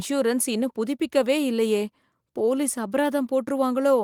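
Nothing's wrong with this short speech clip, which has simply come through Opus voice coding at 24 kbps in its full-band hybrid mode, with the audio reaching up to about 20 kHz.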